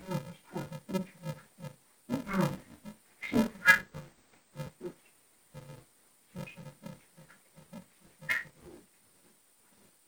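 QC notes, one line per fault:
Throughout: interleaved audio read as planar. The sound is dull and robotic, with a steady buzz at about 375 Hz and no clear drop in pitch. Each short block, about 2.67 ms long and consistent with a 128-sample buffer, holds alternating left and right samples, but its first half is treated as one channel and its second half as the other. Every block is scrambled this way, so the block rate itself becomes an audible buzz.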